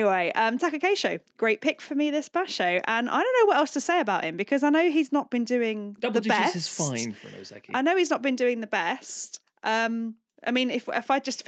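No faults in this speech: the band stops at 8 kHz, which fits normal call microphone processing and a wideband Opus call path.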